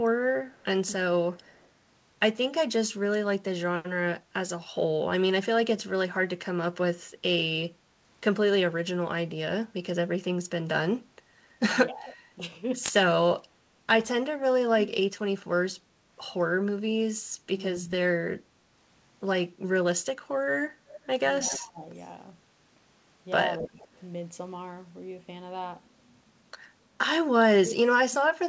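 From 0.49 to 1.68 s there's a faint echo leak: a copy of the speech trails 264 ms behind at about -35 dB, likely from a speakerphone whose echo canceller let some of its pickup through. Between 11.89 and 12.42 s the speech dips by about 10 dB for a fraction of a second. That's speech suppressed in double talk, likely the canceller ducking everything while both sides talked. The echo leak comes back louder from 12.1 to 14.88 s, near -20 dB, still 264 ms late, likely the same leaky canceller. At 17.44 to 17.9 s there's a short, sharp suppression dip of about 20 dB, likely double talk again. From 20.9 to 23.88 s the echo returns at about -20 dB, likely the same cause. It overlaps with patchy suppression from 21.51 to 23.91 s, with dips of around 15 dB that add up to about half a second, likely the canceller clamping down during overlapping talk.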